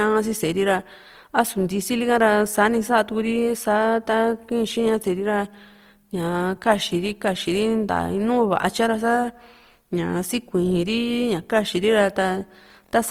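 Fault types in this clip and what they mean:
Opus compression: The speech has a grainy, rough texture all the way through, most likely from Opus running in its music-oriented CELT mode at a low rate, something around 24 kbps. The encoder holds each band's energy and papers over starved bands with folded or noise-like content, so you don't get MP3-style swirl. Instead the voice sounds noisy and coarse, even though the bandwidth stays full and the top end hasn't been dulled.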